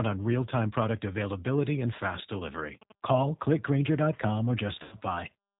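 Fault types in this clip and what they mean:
G.729 codec, throughout: The speech is carried through a low-rate voice codec that fits 8 kbit/s G.729A. It rebuilds each 10 ms frame from a vocal tract filter, a pitch predictor and a handful of pulses rather than the real waveform. Nothing above 4 kHz survives, so the sound is narrowband and muffled. The damage is plainly audible as a rough, slightly synthetic texture across the whole clip.
VoIP packet loss concealed by the speech codec, 4.83 to 4.96 s: About 90 ms of audio went missing, which fits three lost packets. The decoder filled the gap by extending its last pitch and filter settings while lowering the gain frame by frame, so the sound smears into a buzzy tone or coloured noise that fades. Each frame builds on the one before, so the speech stays weak or distorted for a short while after the packets return.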